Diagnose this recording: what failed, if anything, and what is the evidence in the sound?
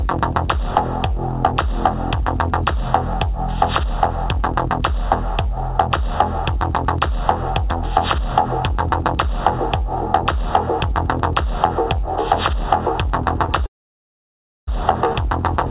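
Network stage, short concealed packet loss. At 13.46 to 13.50 s there is a brief smear in the sound. About 20 ms of packets arrived too late. The receiver extended the preceding sound to cover the gap, then blended back into the real audio.

Network stage, long network dropout. From 13.66 to 14.69 s the sound stops. A short fading continuation is followed by almost a second of silence. Audio resumes without the missing stretch, likely lost packets. The call band stops at 4 kHz, which fits a 64 kbps G.711 call codec.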